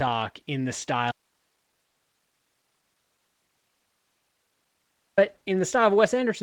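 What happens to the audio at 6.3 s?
Nothing goes wrong at 6.3 s; the speech runs on intact through that moment.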